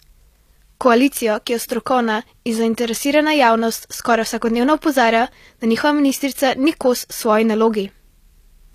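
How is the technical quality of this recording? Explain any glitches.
Technical quality is middling. Across the whole speech clip there's plainly audible damage, likely from HE-AAC compression at a low bitrate, around 24 kbps. Treble is rebuilt from copied lower bands, so s sounds turn gritty and lispy, with nothing above 14.9 kHz.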